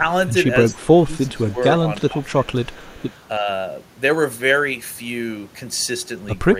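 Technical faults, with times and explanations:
0.70–0.76 s, 1.47–1.64 s and 2.27–3.21 s, echo leak: a faint copy of the speech returns 316 ms late, about 25, 35 and 30 dB down, likely loudspeaker pickup the echo canceller missed. Spectrograms show weak harmonic traces repeating earlier patterns, shifted in time.
0.77–1.58 s, 2.01–2.76 s and 3.39–3.48 s, speech suppressed in double talk: the speech drops by up to about 15 dB, only about 5 dB in the last, likely the canceller ducking both talkers together. Waveform envelopes shrink in notches.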